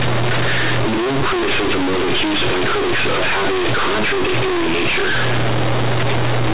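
From start to finish the speech is hit by companded audio read as linear: mu-law bytes from the G.711 telephone path are played as plain 8-bit samples without being expanded. Every sign change throws the output across about half its range, so quiet passages come out as loud as peaks. The result is harsh, buzzy distortion with heavy noise filling the pauses. The waveform looks like a dense block, and the spectrogram shows broadband energy smeared up to 4 kHz.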